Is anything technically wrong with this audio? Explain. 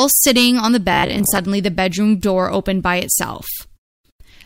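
Yes. From 0.93 to 1.42 s there's robotic sound from repeated short buffers: a rigid, metallic 66.8 Hz buzz, likely from replaying roughly 15 ms chunks for about half the audio.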